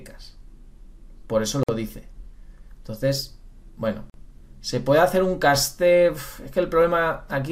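Separately encoded pieces were joined without trimming the encoder's start-up delay and last-frame padding, so a gap at a join of encoded pieces opens twice. The first runs from 1.63 to 1.69 s, a gap of about 52 ms. The second runs from 4.10 to 4.14 s, about 44 ms. Each cuts into continuous sound, with the codec smearing the edges, and the audio then resumes exactly where it stopped.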